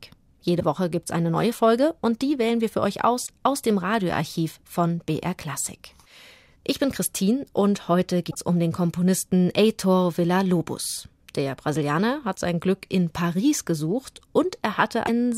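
Damaged data in a compressed stream breaks the speech at 0.56, 3.23, 8.27, 12.32 and 15.06 s: brief glitches, 30 to 80 ms, where the decoder loses sync.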